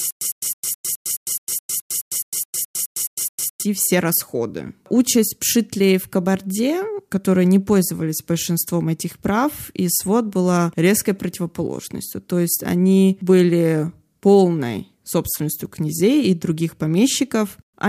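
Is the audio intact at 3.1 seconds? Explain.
No. At 3.1 s the speech is caught in stutter with silent gaps, running from the start to 3.63 s. A 107 ms fragment repeats every 212 ms, with silence between, likely from a stalled stream.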